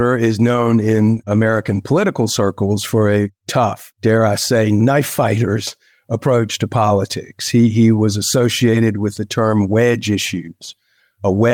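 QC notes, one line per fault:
0.53–2.13 s, call bitrate drop: the call's bandwidth estimate fell and the encoder was cut from 32 to 18 kbps, staying at the low rate for about 1.5 s. With fewer bits the speech is coded more coarsely and sounds rougher until the bitrate recovers.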